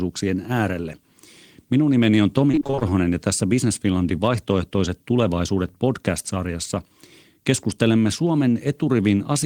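From 2.51 to 2.91 s, between "nimeni on" and "ja tässä", the speech breaks up with repeated packet loss (robotic sound): a rapid string of short holes, none longer than about 22 ms, each patched by stretching the previous sound, so roughly half the stretch turns choppy rather than dropping out once.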